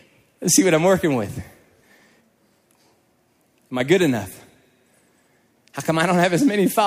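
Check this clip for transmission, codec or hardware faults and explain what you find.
One fault stands out in this speech: a sudden gain jump at 3.7 s. The level, background noise included, drops by about 5 dB in one step, likely from an unramped gain change. On the waveform the envelope steps down abruptly, and on the spectrogram every band dims together.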